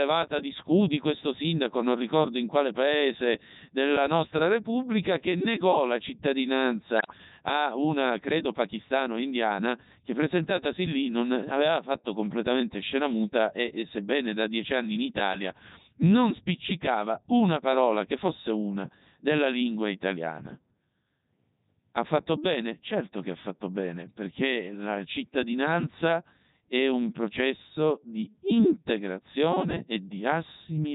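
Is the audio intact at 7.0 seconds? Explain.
No. Bit errors on digital voice radio corrupt the span from 6.97 to 7.18 s. With roughly one bit in twenty flipped, each damaged frame decodes with the wrong pitch, level, voicing or spectral shape. The synthetic speech lurches in pitch and loudness and breaks into bleeps and warbling, robotic gibberish. Underneath, the Codec 2 vocoder runs through the whole clip, with a heavy sound that fits its 3.2 kbit/s mode. It sends only pitch, voicing, energy and a spectral envelope, then rebuilds the speech from sine waves, so the speech at 7.0 s is buzzy and robotic rather than a faithful waveform.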